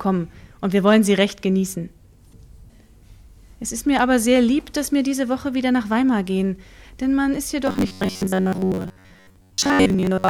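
From 7.67 s to 10.29 s the sound turns into robotic sound from repeated short buffers: a rigid metallic buzz at 93.8 Hz. This is likely a starved audio stream whose last 10.7 ms fragment is looped, covering most of the real material.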